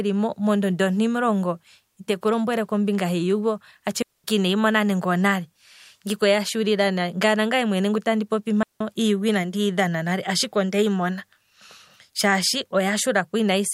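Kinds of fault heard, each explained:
Digital wireless dropout: at 4.02 to 4.24 s and again at 8.63 to 8.81 s, the speech drops into clean near-silence for about 0.22 s and 0.18 s, the first gap falling between "lombwele kombinga hiiyugo atshi" and "ineyi mona nande onale". The radio link lost too much data to rebuild the audio, so the receiver muted with a very quick fade. This leaves a neat hole without any crackle or noise burst on either side.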